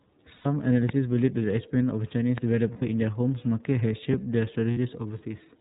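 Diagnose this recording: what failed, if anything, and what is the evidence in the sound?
The whole clip goes through the iLBC codec, and you can plainly hear it. Nothing comes through above 4 kHz, and the speech has that slightly rough, synthetic edge. The texture fits iLBC's 13.33 kbps, 30 ms frame mode, with each frame's excitation coded on its own.

There are lost iLBC frames on the network side at 0.35–0.46 s, 2.72–2.82 s and 4.71–4.77 s. Each gap turns into a held, faintly buzzy vowel as the decoder repeats the last pitch cycle with noise. The lengths fit three, three and two missing 30 ms frames, and the speech snaps back right after.

There are two loud pops, at 0.89–0.91 s and 2.38–2.40 s. The first is sharp and around 10 dB above the speech, the second around 15 dB, and the speech runs on underneath both. They're likely voltage spikes in the analogue wiring, from a plug, switch or static discharge.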